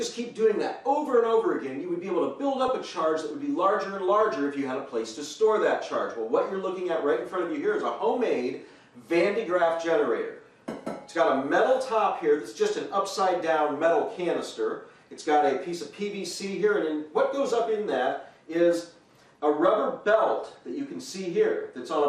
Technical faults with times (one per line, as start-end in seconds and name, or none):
0.00-22.09 MP2 compression
2.61-2.68 DAB burbling
20.47-20.64 DAB burbling